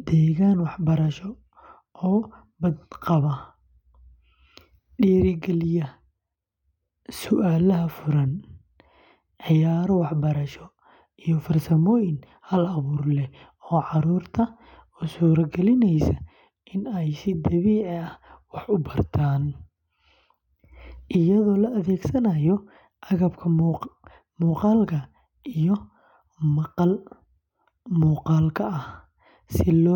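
No technical faults are audible.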